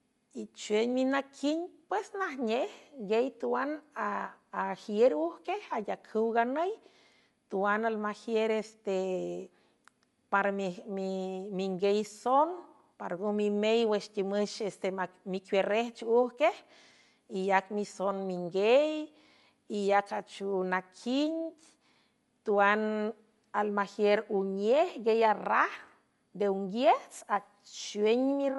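Throughout the speech, nothing sounds above 11.5 kHz, and the top end is clearly grainy and breathy. The likely cause is Bluetooth LC3 compression filling discarded highs with noise.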